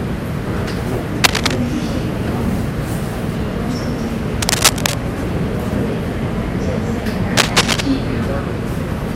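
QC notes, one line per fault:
1.24–1.56 s, 4.42–4.94 s, 7.37–7.81 s, cable scratch noise: brief rustling bursts a few dB above the sound, likely from a worn cable or connector moving and making uneven contact.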